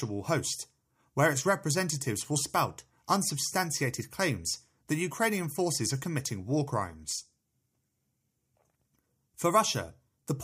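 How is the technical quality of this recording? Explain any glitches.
No glitches can be heard anywhere in this speech recording. There is nothing technical to explain.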